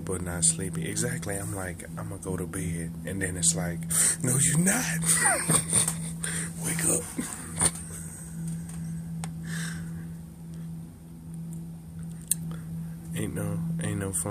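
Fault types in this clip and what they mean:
No technical faults can be heard in this audio. Nothing in the sound stands out as a defect that would call for a fault type.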